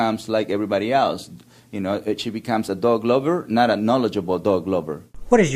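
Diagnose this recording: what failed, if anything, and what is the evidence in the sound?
Nothing failed: the recording shows no evidence of a fault at any stage.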